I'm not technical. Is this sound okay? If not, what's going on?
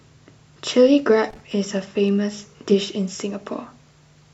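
No. From 1.30 to 1.53 s a short burst of irregular crackle cuts into the speech. That's loose connector crackle: a worn or dirty contact briefly losing connection.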